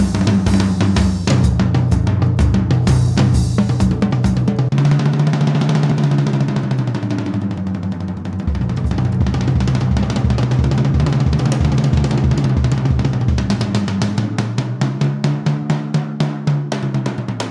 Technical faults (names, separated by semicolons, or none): none